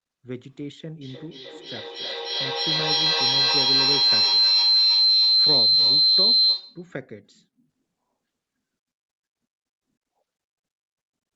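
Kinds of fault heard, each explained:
Feedback howl: a shrill tone around 4 kHz swells to about 13 dB above the speech, its loop repeating every third of a second or so, as loudspeaker-to-microphone pickup gains level each trip.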